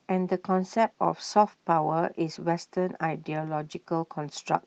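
Nothing stood out on listening to this speech clip.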